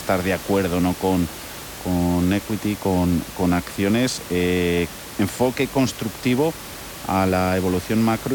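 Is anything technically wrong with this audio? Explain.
No, nothing technically wrong can be heard here.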